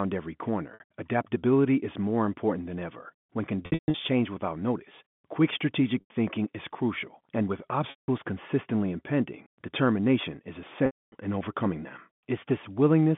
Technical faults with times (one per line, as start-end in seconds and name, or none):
0.74-0.80 packet loss with pitch repetition
3.66-3.94 packet loss with pitch repetition
6.00-6.10 packet loss with pitch repetition
7.90-8.08 packet loss with pitch repetition
10.86-11.12 packet loss with pitch repetition